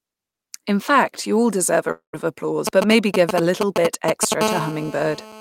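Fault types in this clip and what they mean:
Long network dropout: audio stops after "you all deserve a", a fading fill then brief silence, likely lost packets, resuming at "of applause" with about 0.22 s gone.
GSM signalling bursts: a nearby 2G phone's intermittent radio bursts, rectified into galloping ticks and short 217 Hz buzzes from 2.67 to 4.34 s, roughly as loud as the speech.
GSM phone buzz: continuous 217 Hz burst transmission from a 2G phone in a call, heard as a hard, harmonic-rich rasp about 8 dB below the speech from 4.41 s to the end.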